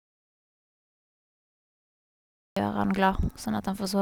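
From the very start until 2.57 s the clip is dead silent: no room tone, no hiss, nothing at all, and then the speech arrives abruptly as if already mid-flow. This is an audio dropout to silence, already in progress when the clip begins. The likely cause is that the input was lost, through a disconnected device, a broken link or an accidental mute, while the recorder kept writing silence, so whatever was said during those first seconds is simply missing.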